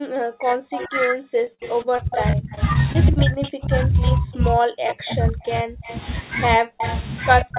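From the very start at 0.0 s and through to the end, the speech level collapses repeatedly, in places falling by something like 40 dB. This is speech suppressed in double talk, likely from an echo canceller that could not tell the near talker from loudspeaker echo while both sides were active, and so attenuated everything. On a waveform it appears as sudden deep notches in the envelope. A spectrogram shows energy within the 4 kHz band of the call path fading.

From 0.73 s onward a second copy of the speech trails the original by 132 ms, nearly as loud as the direct sound. This is an echo leak, likely because the far end's microphone picked up its own loudspeaker and the canceller failed to remove all of it, so the residue was sent back. A spectrogram shows each harmonic pattern repeated about 0.13 s later at slightly lower intensity, and the waveform carries smeared double onsets.

Between 1.44 s and 3.53 s the sound turns choppy, with repeated packet loss (robotic sound). 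Roughly a dozen short holes, the longest 38 ms, were patched by stretching the preceding sound, so about a tenth of that stretch is synthetic continuation rather than real signal. On the spectrogram this shows as brief frozen, smeared columns breaking the harmonic lines. The waveform shows repeated near-identical cycles in place of natural variation.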